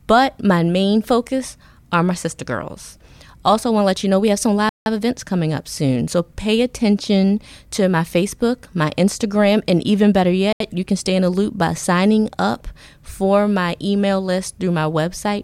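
The speech drops abruptly to silence twice, for 168 ms at 4.69 s and 77 ms at 10.53 s, then resumes. This is likely a Bluetooth stall, where interference delays packets, the headphone buffer empties, and playback waits for retransmissions.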